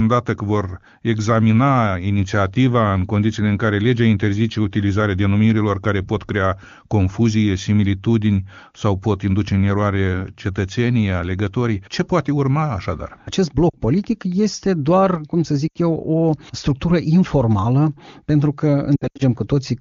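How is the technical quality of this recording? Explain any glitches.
Three short glitches of lost AMR speech frames stand out against clear wideband speech whose faint coding character fits AMR-WB (HD Voice) at its top rate. The first falls at 13.70–13.74 s, a 40 ms gap. The second, 80 ms long, falls at 15.68–15.78 s, between "doar cum să" and "eu o structură informală". The third is scattered across about 240 ms at 18.96–19.22 s, right after "o structură informală pentru", with its longest run lasting 80 ms. Corrupted frames failed their checksum, so the decoder repeated the last good pitch and vocal tract settings at falling gain. That smears and fades the sound instead of cutting it to hard silence or clicking the way a plain dropout would.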